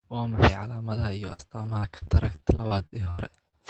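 Packets in this speech clip were repeatedly lost or delayed from 1.25 to 3.55 s, and each gap was patched by extending the preceding sound. The result is repeated packet loss with a choppy, robotic quality: about a fifth of that stretch, roughly 400 ms, is rebuilt, with gaps up to 82 ms, over a call codec's 8 kHz band limit.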